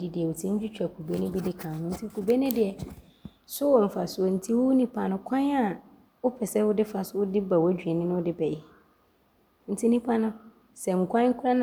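No technical faults can be heard anywhere in the recording; the speech signal stays steady and intact throughout.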